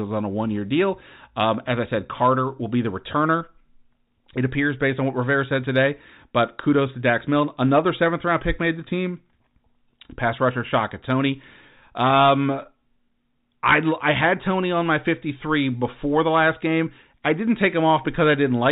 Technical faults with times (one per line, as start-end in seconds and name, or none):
none